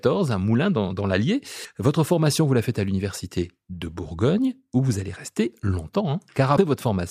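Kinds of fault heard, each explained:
Damaged data in a compressed stream: corrupted bytes make the decoder misread a frame and resync, giving a tiny blip in the speech at 1.65 s and 6.58 s, each about 4 ms long. Each shows as a thin broadband vertical streak on a spectrogram and an abrupt discontinuity in the waveform.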